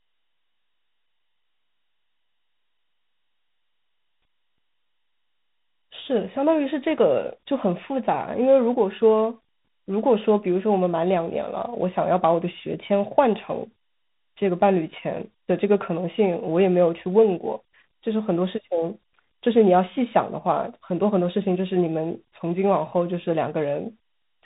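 From start to finish this speech has been through tandem speech coding: it was decoded and re-encoded at each network hop, so every coder had to work on the previous one's leftovers. What you hear points to a CVSD link feeding an ADPCM stage like G.726 at 32 kbit/s, with two lossy speech coders stacked. The result is gritty, and it's muffled too, with nothing above 3.8 kHz.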